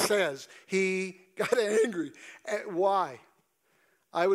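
Speech recording with no audible technical faults.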